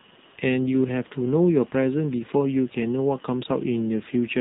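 From start to finish the speech has the boxed-in, phone-call sound of the AMR narrowband mobile codec, AMR-NB. Everything above 4 kHz is simply gone, so sibilants go dull and the top end feels clipped off. The codec rebuilds the voice from a vocal-tract model fed by a handful of pulses per frame, and here the damage is plainly audible: a buzzy, synthetic edge that fits one of the lower modes, around 7.4 kbps.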